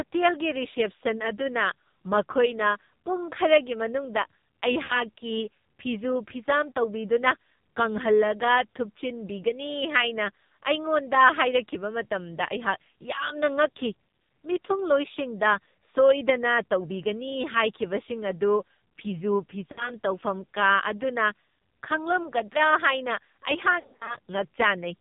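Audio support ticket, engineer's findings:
AMR narrowband mobile codec, whole clip: speech modelled at a very low rate, fitting AMR-NB near 5.9 kbps. Nothing above 4 kHz; heavily buzzy, synthetic tone.

Lost AMR speech frames at 4.84–5.03 s and 19.72–19.92 s (about 60 ms gone each), and 23.80–24.17 s (gaps up to 40 ms). Decoder concealment repeats pitch with fading gain, so the audio warbles and dips.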